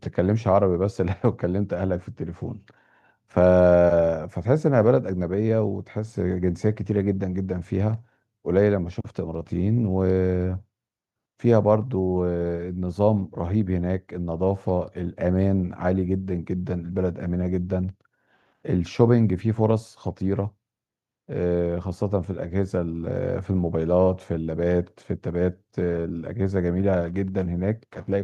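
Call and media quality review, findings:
Nothing stood out on listening to the speech, so there are no findings to log against this call.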